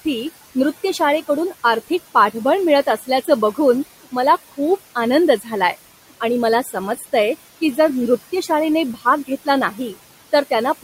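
Noise suppressor artifacts run through the whole clip: the suppressor pulls the steady room noise down by about 16 dB between phrases, so the remaining noise sinks between words and rises under them. Speech cut by the noise suppressor occurs at 2.86–3.28, 5.39–5.52, 6.64–6.76, 6.96–7.06, 8.94–9.04 and 9.71–9.95 s. The suppressor mistakes quiet speech for noise and dips it by about 7 to 13 dB, so brief stretches sound swallowed or faint. Each affected stretch lasts only about 0.1 to 0.15 s, against room noise sitting about 17 dB below the speech.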